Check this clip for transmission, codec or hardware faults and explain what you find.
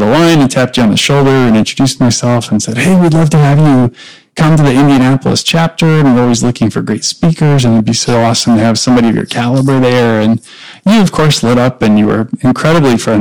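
Hard clipping runs through the whole speech clip. The signal is driven about 18 dB beyond what the converter or processing stage can pass, so nearly a third of the samples are cut off flat. Those square tops add strong harmonics high into the spectrum, heard as a harsh, constant fuzz on every loud syllable. The waveform shows flattened plateaus on both positive and negative peaks, and a spectrogram shows broadband energy smeared upward on each peak.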